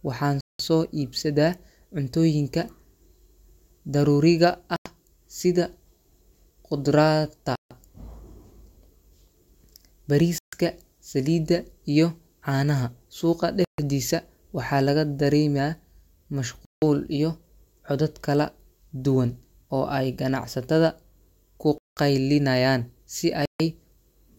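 Speech drops to dead silence for about 95 to 190 ms at 0.41, 4.76, 7.56, 10.38, 13.65, 16.65, 21.78 and 23.46 s, likely a Bluetooth stall where delayed packets left the playback buffer empty.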